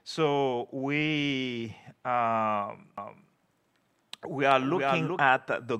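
From 2.98 s to 5.20 s the sound is doubled. A second copy of the same audio runs behind the first by around 0.4 s. It sits roughly 5 dB below the original. It is full-band and dry, with no decay or room colour. It cuts in and out abruptly at those times. This is a doubled audio track. The likely cause is the signal being captured twice, once through a slower path, with both copies mixed together.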